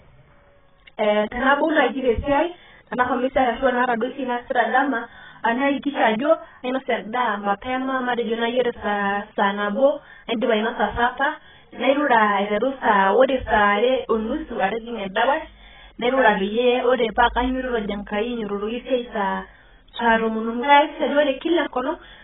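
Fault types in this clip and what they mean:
AAC compression: The speech sounds dull and boxed-in across the whole clip, with nothing above 3.8 kHz and a heavily smeared, processed texture. The likely cause is AAC-LC coding at a very low rate, fitting a bitrate around 10 kbps, where the encoder spends its few bits on the lower bands, drops everything above the cut-off, and quantises the remaining frequency lines so coarsely that detail blurs.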